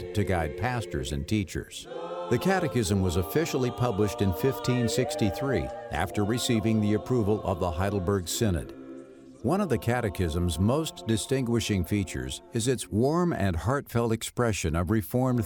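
No technical faults can be heard anywhere in this audio.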